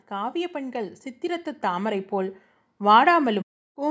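Speech through a call's microphone chain, content topping out at 8 kHz, with automatic gain rising from about 0.09 s to the end at 3.9 s. The control heard a quiet input and kept pushing gain up, roughly 14 dB, so voice and background swell together.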